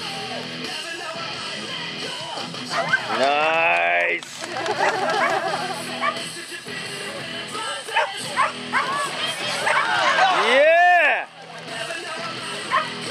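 Nothing is technically wrong with this audio clip.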